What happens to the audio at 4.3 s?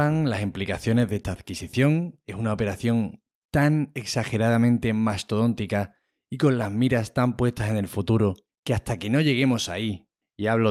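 At 4.3 s the speech carries on intact, with no dropout, click or distortion at that point.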